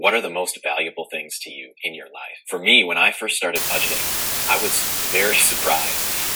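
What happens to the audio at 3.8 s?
Low bit depth with dither starts at 3.56 s and runs to the end. Only 4 bits remain, so the dithered rounding error becomes a steady hiss about as loud as the sound itself.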